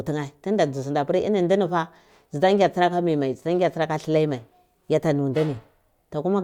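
No technical faults are audible.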